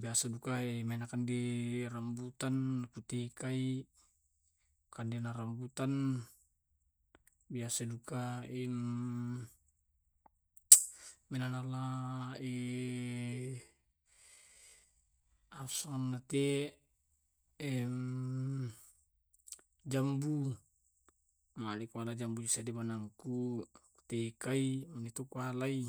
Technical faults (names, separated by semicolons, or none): time-stretched section